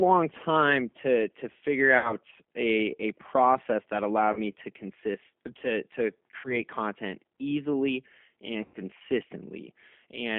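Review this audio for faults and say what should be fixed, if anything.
Throughout, the speech sounds slightly rough and synthetic, and it is confined to roughly 250 Hz to 3.4 kHz. This is plainly audible G.729 codec damage, consistent with G.729A at 8 kbit/s, which rebuilds each 10 ms frame from a vocal tract filter, a pitch predictor and a handful of pulses. Carrying the call on a wideband codec, or at a higher bitrate, would prevent it.

At 1.98–2.16 s, 4.33–4.39 s, 6.38–6.57 s and 8.65–8.77 s, the speech smears into a buzzy tone or coloured noise that fades, and stays weak for a moment afterwards. This is VoIP packet loss concealed by the speech codec. The decoder stretches its last pitch and filter across gaps of 60, 30, 60 and 90 ms, which fit one to three lost packets, and recovers slowly afterwards. A better network path or forward error correction would prevent it.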